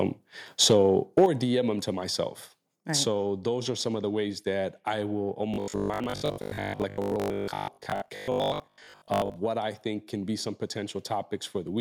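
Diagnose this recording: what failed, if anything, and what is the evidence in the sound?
The microphone overload most likely happens at the converter, where the input gain drives the signal past its limit. At 0.63 to 0.77 s the loudest sound goes over by about 4 dB, and at 1.17 to 1.26 s by about 3 dB. A few percent of samples are affected in the first burst and more in the second. You hear a crackling edge on those peaks. On a waveform the tops are flattened into plateaus, and a spectrogram shows broadband smearing above the speech harmonics during those moments.

The microphone volume stepped down at 1.26 s, right as the second overloaded peak ends. The level drops by about 6 dB in a single step, and both the voice and the background fall together. This points to call processing or the driver reacting to the clipping by cutting the device's input gain. On a waveform the envelope abruptly shrinks to roughly half its height. 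A spectrogram shows every frequency band darkening at the same instant.

The robotic sound from repeated short buffers runs from 5.54 to 9.36 s, starting after "ways that I will" and ending before "what I think can". It is a rigid, metallic buzz at 50 Hz, which fits 20 ms buffers being replayed while fresh audio arrives too late at the driver or buffer stage. Most of the stretch is repeats rather than new audio. A spectrogram shows a comb of harmonics spaced 50 Hz apart. The waveform repeats the same 20 ms shape over and over.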